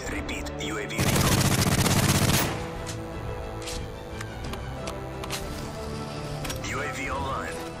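A thin, steady buzz sits under the audio from 1.79 s to 5.86 s. It is DECT cordless phone buzz. A nearby DECT handset or base sends a radio burst every 10 ms, and the audio circuit rectifies it. The result is a 100 Hz buzz rich in harmonics, well below the main sound.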